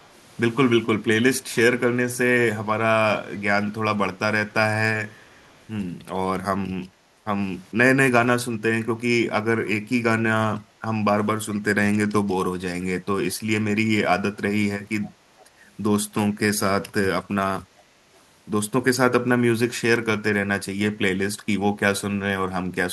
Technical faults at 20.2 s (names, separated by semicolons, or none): none